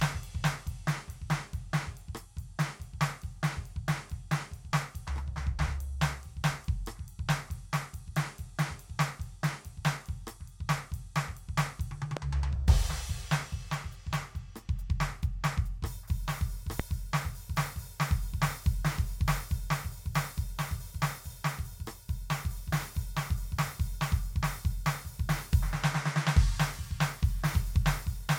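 Loud pops at 12.17 s and 16.8 s cut into this music, each a single sharp thump standing roughly 15 dB and then 20 dB above the music, which keeps playing underneath. A sudden voltage jump, likely from a switch, connector or static discharge, causes them.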